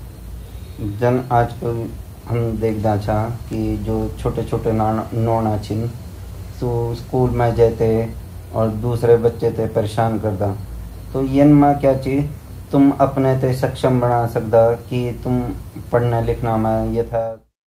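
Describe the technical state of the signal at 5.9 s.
At 5.9 s the speech signal is intact, with no audible fault at that moment.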